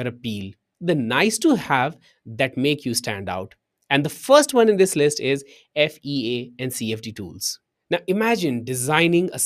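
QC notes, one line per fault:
No faults found on this pass; nothing to log.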